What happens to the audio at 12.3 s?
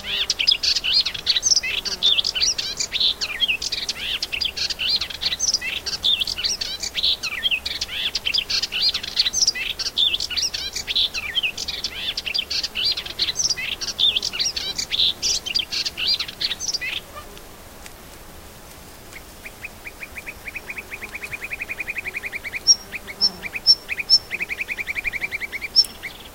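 Nothing goes wrong at 12.3 s; the sound carries on intact through that moment, with no dropout, click, distortion or other fault.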